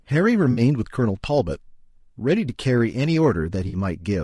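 From the first moment the speech has a rough, grainy texture, with a hiss filling the gaps between the harmonics and a top band that sounds thin and somewhat synthetic. This is likely low-delay AAC compression, the AAC-ELD variant used for calls. Its short frames cannot separate closely spaced harmonics well, and at the low bitrate the damage suggests, perhaps around 32 kbps, the encoder fills the detail it cannot afford with shaped noise.

From 0.51 to 0.61 s, and again from 3.67 to 3.77 s, the sound turns briefly smeared and phasey, a noisy blur in place of clear speech. Each patch is AAC frame loss with concealment. About 60 ms of audio went missing each time, which fits three lost frames. The decoder filled the gap by reusing the last good spectrum with altered phase. That keeps the level roughly steady but loses the real detail.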